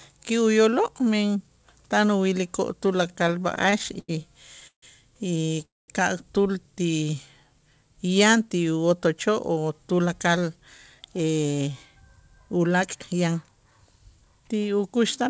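Right after "tan uwilikoo'", from 2.96 to 4.84 s, you get repeated stalls (stutter): packets kept showing up late, so the jitter buffer ran dry 18 times and the receiver stretched the last sound to cover, about 0.4 s in all, the longest single hole 152 ms. About a fifth of that stretch is filler. Nothing's lost, it just lurches along.

At 5.65 to 5.90 s there's a call audio freeze. The sound drops out to near silence for roughly 220 ms and then resumes right where it left off. That's likely packets held up in transit, with the receiver bridging a 230 ms wait and pushing everything after it later by the same amount.

Around 6.91 to 7.10 s comes a jitter buffer slow-down. The receiver padded in about 38 ms by repeating single pitch periods to rebuild its reserve, so for that moment the speech runs at 85% speed with the pitch unchanged, and the sound is audibly drawn out.

After "yan ti", from 8.90 to 14.00 s, there's a jitter buffer speed-up. 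The buffer was holding too much, so the receiver kept trimming short pitch-period chunks, about a third of a second in total. The speech runs at 106% speed, same pitch, and comes across a touch hurried.

All of this rides on a G.722 call path with nothing above 8 kHz.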